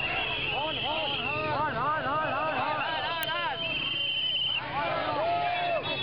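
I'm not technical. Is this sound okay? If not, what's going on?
No. At 3.23 s there is an uninitialised buffer: the system played a tiny chunk of memory before any audio was written into it, so leftover junk was heard. That chunk lasted under a millisecond, which fits a 32-sample buffer, and it comes through as a sudden crack.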